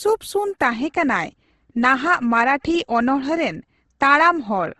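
Throughout, the speech sounds grainy and rough, with nothing above 12.1 kHz. This is likely Opus compression in music mode, whose scarce bits, fitting 16 kbps, fill bands with noise.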